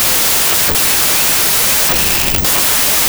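Throughout, 16-bit audio read as packed 24-bit, a wrong sample width, buries the speech in loud noise at 1.5 times the speed and pitch.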